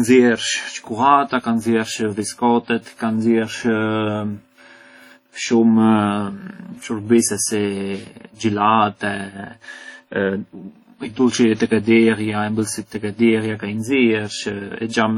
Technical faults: WMA compression

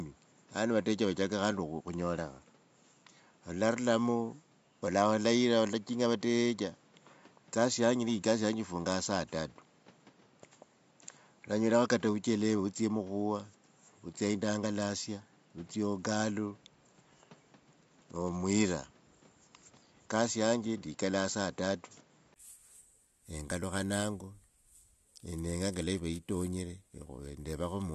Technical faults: input switched to a poorer device

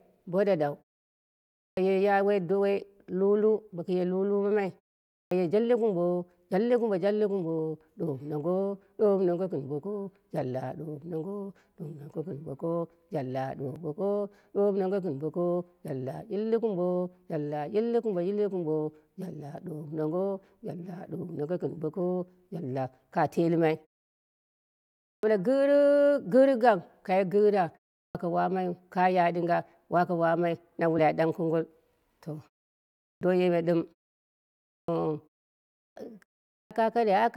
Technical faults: clipped start after a pause; damaged data in a compressed stream

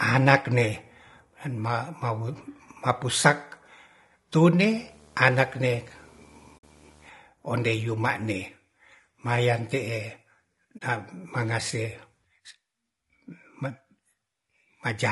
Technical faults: low-delay AAC compression; video or display buzz; AAC frame loss with muting

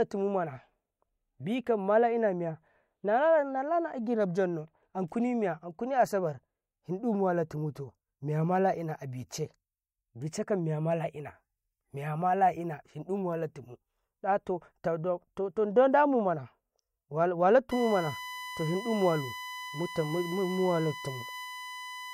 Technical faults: USB whine

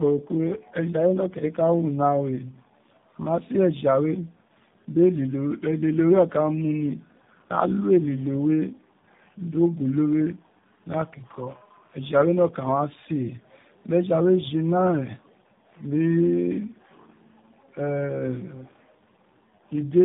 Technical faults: tandem speech coding

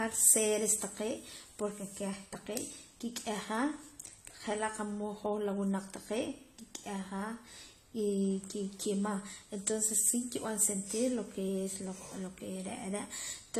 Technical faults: AAC compression

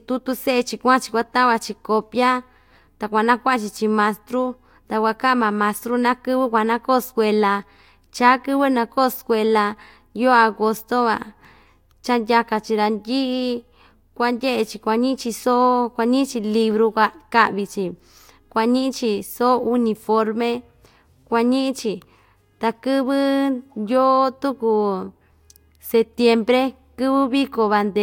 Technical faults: none

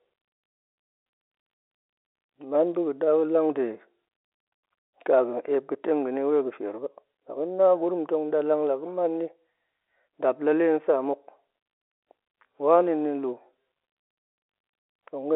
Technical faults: none

